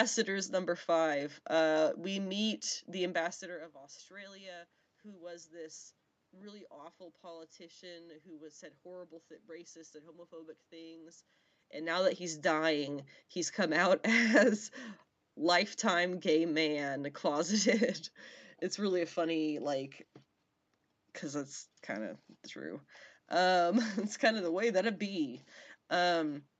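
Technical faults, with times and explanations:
No technical faults are present in this speech recording.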